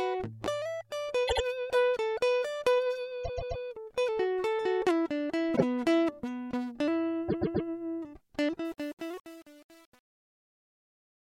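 Music with a stutter from repeated frames: a 78.4 ms block plays twice more at 1.27–1.43 s, a 130.6 ms block three more times at 3.23–3.62 s, a 78.4 ms block once more at 5.55–5.63 s, and a 130.6 ms block three more times at 7.28–7.67 s. Each stutter comes from a run of compressed frames being written or sent again, and together they lengthen the track by about 1 second. The fade-out, which ends at 11.23 s, has truncation distortion from 8.65 s to the end. The fade stage drops low-order bits without dither, which points to only about 7 bits being kept. The decaying waveform collapses into coarse steps and turns gritty as the level falls.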